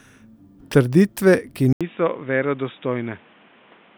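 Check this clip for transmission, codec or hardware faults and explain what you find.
At 1.73 s the speech drops out for 80 ms, then returns dull and boxy with nothing above 3.8 kHz, roughly 10 dB quieter, over a new noise floor around 30 dB down. The input likely switched to a poorer device, whose narrower band and own noise persist to the end.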